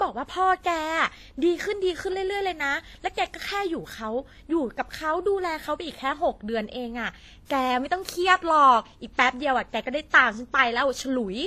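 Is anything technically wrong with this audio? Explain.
Yes. Throughout, the speech was likely transcoded between lossy codecs. It fits a 24 kbit/s HE-AAC encode re-encoded as 64 kbit/s WMA. The second codec spends bits on the first codec's artefacts, so both sets of artefacts can be heard together, with nothing above 14.9 kHz.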